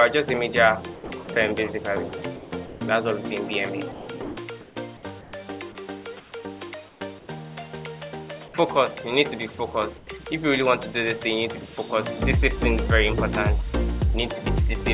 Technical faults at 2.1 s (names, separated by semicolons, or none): sound dropped by the voice detector; comfort noise in place of the background